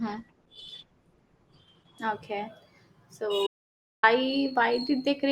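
For the first 2.0 s the speech sounds thin and smeary, with the top end either missing or replaced by a hissy, synthetic-sounding fill. That's an adaptive stream starting at a low bitrate: the player grabbed a cheap version to get going fast, and the sound points to something like Opus at around 12 kbit/s. Once it had sized up the connection it switched to a richer stream, which fits roughly 64 kbit/s. The quality jumps up abruptly at 2.0 s, with no gap.

From 3.47 s to 4.03 s there's an audio dropout to silence. For about 0.56 s everything vanishes, room tone included, so the gap is plain silence rather than a quiet stretch. The sound is cut off mid-flow and comes back just as abruptly. Whatever was said in that window is simply gone. The likely cause is the input being lost for a moment, such as a device or link hiccup or a brief mute, while the encoder kept writing silence.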